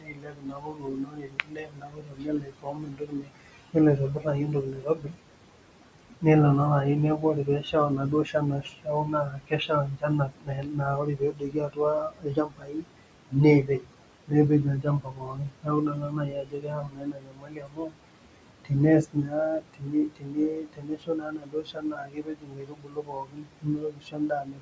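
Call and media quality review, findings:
Noise suppressor artifacts, throughout. Steady room noise pulled down by about 21 dB between phrases, rising back under speech. Component: call noise suppressor, gating noise-classified bands frame by frame. Room noise sits about 13 dB below speech.

Speech cut by the noise suppressor, in five stretches: 0.0–5.18 s, 7.18–12.98 s, 13.3–13.93 s, 14.27–18.06 s, 19.04 s to end. Soft consonants and word endings swallowed or faint. Roughly 4 s, 3 s, 0.3 s, 3 s and 5 s of speech affected. Deepest drops about 22 dB. Component: same suppressor. Mechanism: quiet speech misread as noise and attenuated with the background. Band limit near 8 kHz from call mic processing.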